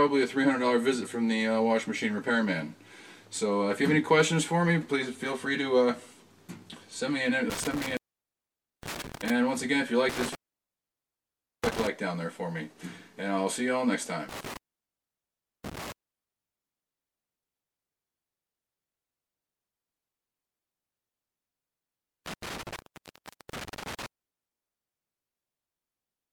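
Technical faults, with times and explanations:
7.5–9.3 s, 10.09–11.87 s, 14.29–15.92 s and 22.26–24.06 s, intermittent contact: the sound drops away with a crackle as it goes and again as it returns, leaving only faint hiss in between. The gaps last about 0.86, 1.29, 1.07 and 0.74 s. A loose plug or cable connection is briefly opening and closing, so the signal path breaks and rough contact at each transition produces the crackle.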